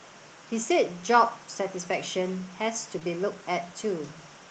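At 2.99 to 3.03 s, short concealed packet loss: 20 ms of speech went missing and was patched by continuing the prior sound. It is heard as a brief smear and shows as a briefly repeated, smoothed stretch on a spectrogram.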